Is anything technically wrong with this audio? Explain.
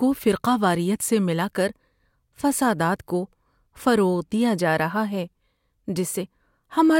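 No, nothing technically wrong can be heard here.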